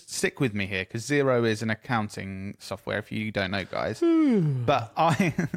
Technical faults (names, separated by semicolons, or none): none